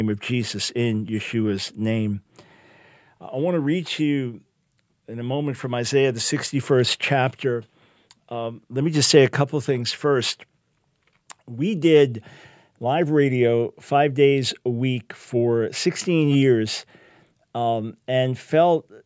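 No technical faults can be heard in this audio.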